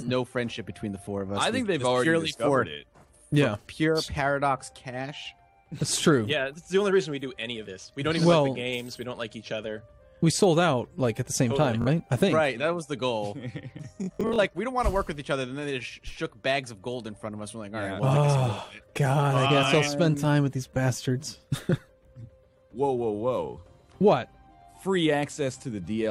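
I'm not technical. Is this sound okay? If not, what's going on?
No. At 11.82 to 11.87 seconds, and over a longer stretch from 14.04 to 14.39 seconds, the sound catches in a quick buzzy repeat, then skips ahead. This is Bluetooth stutter: wireless audio arrived late or got lost, so the player looped its last scrap.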